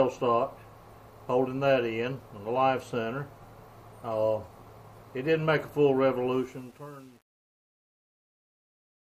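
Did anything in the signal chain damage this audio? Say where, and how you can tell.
Yes. The sample-format conversion in the fade-out, a gain stage that discarded low-order bits without dither, caused truncation distortion on a fade from 6.32 s to the end at 9.07 s. Its grain fits an 8-bit word length. The smooth fade should die away cleanly, but from 6.5 s its tail collapses into coarse square steps. It sounds gritty.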